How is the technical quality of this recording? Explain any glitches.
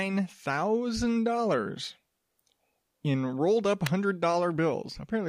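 An electrical switching spike at 3.86 s, just after "in rolled up", is the one glitch in this speech recording. The likely cause is a nearby switch, motor or static discharge arcing briefly, with the audio line picking up that burst of interference. It lasts only a few milliseconds and peaks fairly high, around -10 dBFS, so it comes through as a sharp, dry snap laid over the speech rather than part of it.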